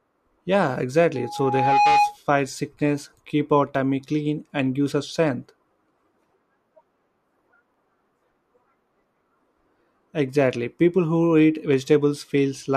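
Loudspeaker feedback squeal runs from 1.15 to 2.17 s, ending just before "sickness keep our". A microphone is picking up the loudspeaker it drives, and at 829 Hz the loop gain rises above one, so that frequency reinforces itself on each pass. The tone swells over roughly 0.7 s into a steady howl sitting about 5 dB above the speech, then stops.

Short skips follow at 3.75, 7.74 and 11.74 s. The first falls between "sickness keep our" and "clean and gives us", and the last comes just after "who eat". Each is a tiny jump of only a few milliseconds with the edges butted together and no silence between them. The exact 4 s spacing points to audio missing between chunks, likely from a recorder dropping a sliver each time it closes one block and starts the next.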